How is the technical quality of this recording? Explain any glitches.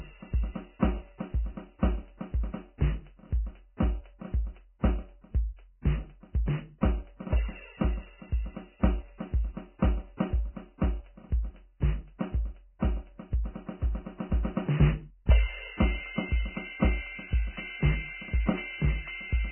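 The music is heavily degraded throughout by what is likely Vorbis compression. Nothing survives above 3.1 kHz, and the remaining treble is coarsely quantised, so fine detail turns into hiss-like grain of similar energy, roughening tones and smearing attacks. That graininess separates it from simple low-pass filtering, and the damage fits a very low bitrate of roughly 10 kbps.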